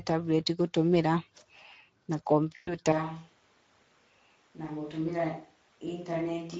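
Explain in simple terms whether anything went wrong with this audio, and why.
Speex codec damage runs through the whole recording. The speech was squeezed through an older internet-calling codec that keeps too little detail, so the speech sounds noisy and hoarse. The missing detail was thrown away for good and cannot be restored.

VoIP packet loss concealed by the speech codec happens from 2.55 to 2.78 s. About 120 ms of audio never arrived, so the decoder kept repeating and fading its last bit of sound. This leaves a brief smeared, fading stretch where the speech should be.

A switch to a distant microphone happens at 2.92 s and lasts to the end. The speech suddenly turns much quieter, roomier and hollow, with more background noise. The likely cause is that the close microphone dropped out and a farther one, such as a camera's, took over.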